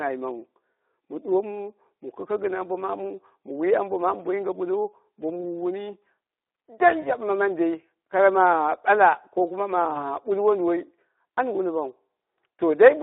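A speech recording passed through the Speex codec at a low-to-middle setting. The whole clip sounds hoarse and grainy, with the excitation thinned to a rough, noisy texture, which fits a rate around 11 kbps. A spectrogram shows energy confined to a telephone band of roughly 300 Hz to 3.7 kHz, with smeared harmonics and noisy fill between them instead of clean, separate pitch lines. There are also two brief episodes of VoIP packet loss concealed by the speech codec, from 7.01 to 7.12 s and from 9.93 to 10.05 s. Each gap points to a single lost 20 ms frame. The decoder repeats its last pitch and filter, so the sound briefly stretches into a fading buzzy tone or coloured noise. Because each frame builds on the previous one, the distortion lingers for about 0.1 s after the packets resume. On a waveform these show as short, repetitive, decaying stretches. On a spectrogram they appear as frozen, fading patches before normal detail returns.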